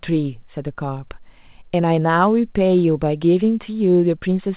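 No technical faults occur anywhere in the speech, which carries the narrow, sub-4 kHz band of ordinary A-law telephone coding as expected.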